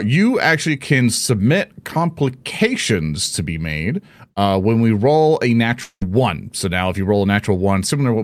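Speech, with a long network dropout from 5.83 to 6.03 s, right after "when we roll a". The final sound is stretched into a fading buzz, then roughly 70 ms of silence, and about 180 ms of speech never returns, likely from lost packets.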